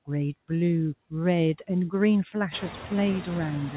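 Throughout the clip, a noise suppressor treats the steady room noise as something to remove and pulls it down by about 19 dB, frame by frame. The noise sinks between words and rises under them, a pumping that grows more exposed once the room noise climbs, roughly from 2.5 s, within the narrow band that stops at 4 kHz.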